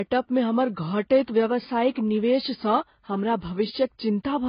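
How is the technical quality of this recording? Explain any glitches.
The technical quality is poor throughout. The speech is dull and band-limited, with nothing above about 5.1 kHz, and it carries a mix of compression artefacts rather than one consistent kind.

The cause is likely transcoding between lossy codecs. The sound points to a very low-rate AAC-LC encode, around 16 kbit/s, later re-encoded as Vorbis at roughly 28 kbit/s. The second encoder wasted bits reproducing the first one's artefacts, then added its own, while the lowest cut-off in the chain, at 5.1 kHz, carried through. What separates this from a single bad encode is that two different artefact textures are layered over one another across the whole clip.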